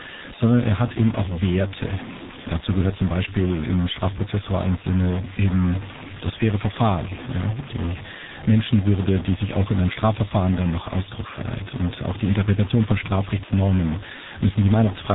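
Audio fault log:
throughout, stuck bit: A distortion rides on the speech and a hiss fills the pauses instead of silence. This is likely one data bit held at a fixed value, which adds an offset to about half the samples. Unlike clipping, it persists at low levels.
throughout, G.723.1 codec: Nothing reaches above 3.8 kHz, and the heavy coding damage leaves the speech muffled and hoarse, with smeared consonants. That fits a low bitrate near 6 kbit/s with a slow-updating voice model. Plain low-pass filtering would dull the sound without adding this roughness.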